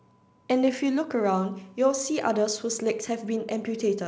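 Nothing faulty is heard in the speech, and the G.722 wideband coding at 64 kbit/s is working as intended.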